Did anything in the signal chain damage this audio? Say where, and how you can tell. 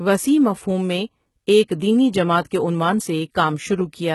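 Yes, at the codec stage, throughout the speech. Nothing is present above 11.8 kHz, and the upper band sounds heavily synthetic: s sounds come out gritty and lispy. That points to likely HE-AAC compression at a very low bitrate, rebuilding treble from copied lower bands.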